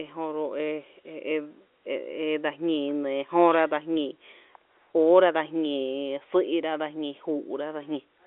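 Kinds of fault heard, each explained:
Nothing faulty can be heard in this speech.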